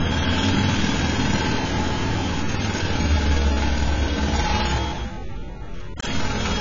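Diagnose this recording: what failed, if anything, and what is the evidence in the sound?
The failure sits at the codec stage: AAC compression applied throughout, most likely AAC-LC at a very low rate, and the damage is heavy. Nothing survives above 7.6 kHz, so the sound is dull and closed-in, with a watery, warbling smear on sustained sounds. On a spectrogram this shows as a hard ceiling at 7.6 kHz with blotchy holes below it. Together these point to a bitrate around 16 kbps.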